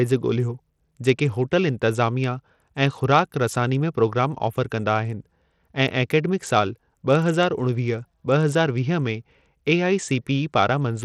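Throughout the speech, treble flickers and drops out under a gritty haze, likely Bluetooth SBC compression starved of bits, fitting a rate near 80 kbps.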